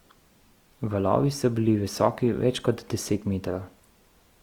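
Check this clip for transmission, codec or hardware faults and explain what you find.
One codec fault runs through the whole recording. Throughout, the speech is grainy and rough, likely from Opus compression: CELT mode, fitting 24 kbps, fills starved bands with folded or noise content.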